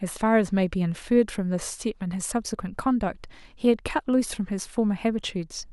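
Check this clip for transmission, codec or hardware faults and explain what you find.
No faults are audible.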